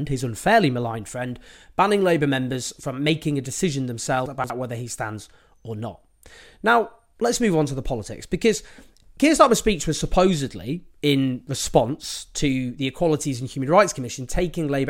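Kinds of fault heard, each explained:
Chunks out of order: one 60 ms block of the speech arrived or was written late and plays three blocks after its proper place, so the span from 4.26 to 4.5 s, between "from making a decision" and "whether he stands or", comes out briefly jumbled. No audio is missing; the four blocks are simply reordered, leaving three hard joins where mismatched waveforms meet.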